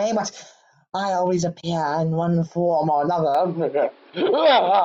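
An input switched to a poorer device, from 3.35 s to the end: the speech abruptly narrows, with nothing above 5.4 kHz, so it turns dull and boxy. There is no silence at the change and the level stays about the same, but a new background noise appears, roughly 30 dB below the speech. This most likely means the recording jumped to a lower-quality microphone or a headset's call mode, which carries a narrower band and its own noise.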